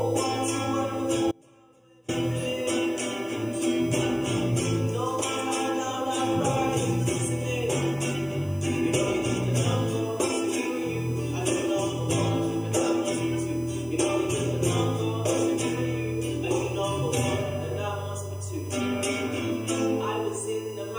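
USB whine runs throughout at a fixed 1 kHz, about 25 dB below the signal, as the bus's 1 ms frame current leaks through power or ground.

An audio dropout to a faint residue from 1.32 to 2.08 s cuts the sound abruptly for 0.77 s. Only a faint trace, about 30 dB down, remains, likely from the source dropping while the downstream path stayed live.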